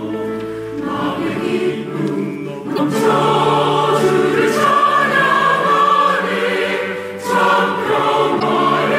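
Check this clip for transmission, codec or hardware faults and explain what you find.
Two short bursts of damaged data in a compressed stream occur, from 2.73 to 2.79 s and from 8.37 to 8.43 s. Corrupted bytes make the decoder misread those frames and hunt for the next header, producing a brief glitch.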